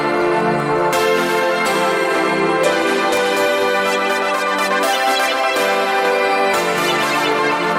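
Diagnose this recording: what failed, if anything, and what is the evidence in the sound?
A Bluetooth SBC bit pool drop runs from 2.39 s to 3.36 s, about a second, at the codec stage of a wireless link. Across that span the treble dulls and a gritty, grainy noise rides on the sound, then clears as the rate recovers. The encoder was starved of bits, which fits the bit pool falling from around 28 to 13, near 100 kbps. The highest sub-bands lost their allocation and the remaining bands were quantised coarsely.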